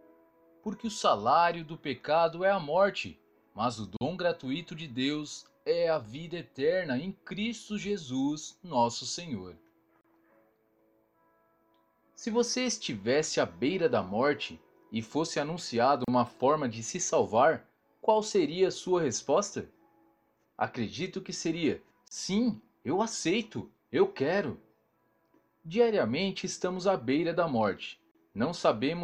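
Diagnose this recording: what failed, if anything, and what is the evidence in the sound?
Gap at a join of encoded pieces, at the codec stage: untrimmed encoder delay and padding cut the sound for 34 to 43 ms every 6 s, at 3.97, 10.01, 16.04, 22.08 and 28.11 s.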